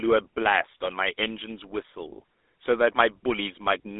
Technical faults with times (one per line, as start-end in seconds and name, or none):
0.00-4.00 GSM full-rate codec